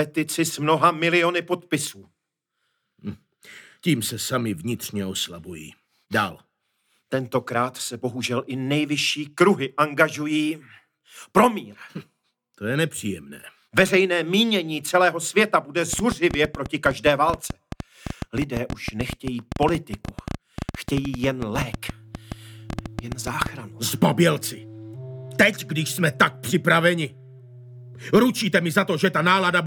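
A train of clicks runs from 15.93 s to 23.47 s, at about 8.8 clicks per second on an uneven pace, roughly seventy in all. Each pulse has much the same short, sharp shape, which points to something injecting spikes into the path, likely interference from nearby equipment or a faulty connection or power supply. The clicks peak around 10 dB above the sound itself, so they come across as a loud, irregular ticking and popping laid over everything, pauses included.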